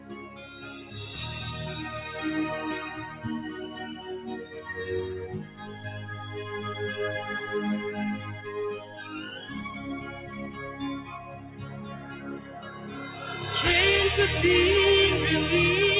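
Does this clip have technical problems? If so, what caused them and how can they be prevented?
Yes. Throughout the clip, steady and sustained parts of the sound rise and fall in level by around 10 dB, giving a pumping, thinned quality while sharp onsets mostly get through. A speech-oriented noise suppressor was left active and treats held tones and ambience as noise. Disable noise suppression, or use a music mode, whenever non-speech audio is sent.

The same suppressor pulls specific stretches down further: 0.00–0.94 s (about 9 dB), 5.44–5.85 s (about 8 dB), 8.85–9.00 s (about 5 dB), 10.08–10.35 s (about 5 dB), and 11.01–13.22 s (about 9 dB), where sustained or decaying sound sinks and tails are clipped short. Turning the suppressor off for this material prevents these cuts.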